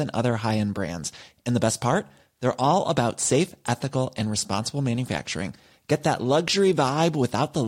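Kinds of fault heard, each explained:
No technical fault can be heard anywhere in the speech. There is nothing to list under any kind.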